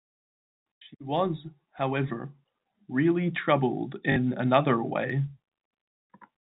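At 4.12 s, right after "was however really troubled", the speech hits packet loss with the last packet repeated. About 40 ms of audio went missing, which fits two 20 ms packets, and the receiver filled the gap by replaying the last good packet until "another way" resumed at 4.16 s. The short run comes out as a brief robotic stutter with a buzz near 50 Hz. On a spectrogram the harmonics freeze into a flat, repeated block with vertical lines at the seams. On the waveform the same cycle shape repeats, with step discontinuities at each boundary. The G.711 telephone coding shows up in its band limit, with nothing above 4 kHz on the spectrogram, and in a faint quantisation noise about 38 dB under the signal.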